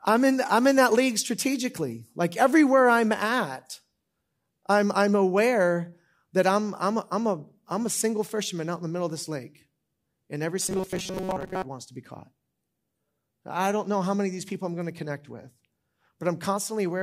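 A speech clip where, from 10.62 to 11.63 s, the voice turns into a rigid metallic buzz pitched at 188 Hz that only loosely follows the speech: robotic sound from repeated short buffers, likely caused by a roughly 5.3 ms chunk being looped over and over while most of the real audio is skipped.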